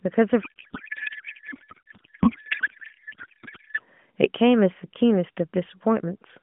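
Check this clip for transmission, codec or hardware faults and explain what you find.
There's one clear fault here, a codec payload misread, running from 0.42 s to 3.83 s in this speech clip. The frames were packed octet-aligned but read as bandwidth-efficient, so every field the decoder picks out is shifted into the wrong slot. It still decodes valid-looking AMR frames, but the speech turns into garbled noise and warble that barely tracks the talker. Around it you can hear the narrowband AMR coding itself, confined to roughly 150 Hz to 3.4 kHz with only light codec coloration.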